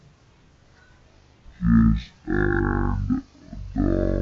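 Throughout, the speech has a wrong sample rate fault: it runs at half speed and an octave low, which fits 44.1 kHz material played back at 22 kHz. A spectrogram shows every harmonic shifted down and the whole waveform stretched to double length.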